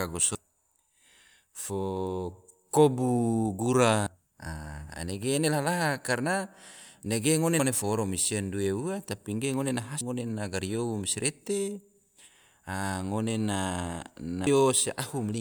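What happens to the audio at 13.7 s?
Nothing goes wrong at 13.7 s; the speech plays through that moment intact, with no dropout, click, distortion or other fault.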